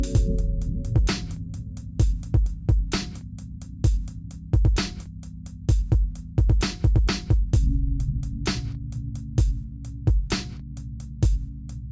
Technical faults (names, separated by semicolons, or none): none